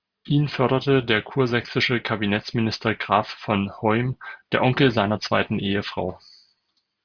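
No technical faults can be heard anywhere in the recording.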